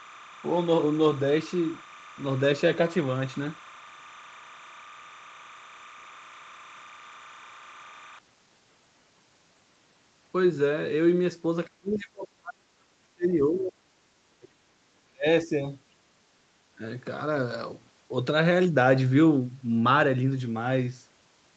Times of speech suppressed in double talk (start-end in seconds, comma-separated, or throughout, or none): 11.67-13.88, 14.39-15.66, 16.76-16.82